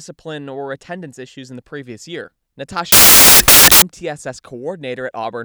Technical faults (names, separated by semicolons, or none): samples built from the wrong bytes